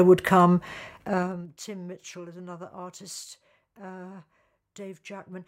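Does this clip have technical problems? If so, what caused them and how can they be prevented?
Yes. Zipper noise runs from 1.02 to 1.5 s as the level falls by roughly 20 dB in unsmoothed 2 dB steps, about twenty per second, each leaving a small click. Interpolating gain per sample, or ramping it across each buffer, prevents it.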